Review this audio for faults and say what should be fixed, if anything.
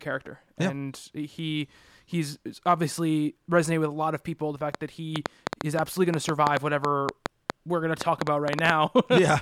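A train of clicks runs from 4.75 s to 9.19 s: about twenty sharp, similar-shaped pulses at roughly five per second, unevenly spaced, peaking around 20 dB above the speech and ticking through the pauses too. That fits a likely cause of electrical interference or a faulty connection or power supply. Unlike mouth clicks or random crackle, these repeat with one shape regardless of what the voice does. Prevent it by isolating nearby equipment and checking the interface's connection and drivers.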